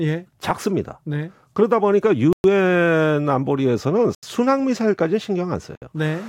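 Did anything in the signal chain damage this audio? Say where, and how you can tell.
Yes. The speech drops to dead silence three times, at 2.33 to 2.44 s (113 ms), 4.15 to 4.23 s (81 ms) and 5.75 to 5.82 s (64 ms), then resumes abruptly. These are likely Bluetooth stalls in wireless playback: delayed packets let the headphone buffer run empty.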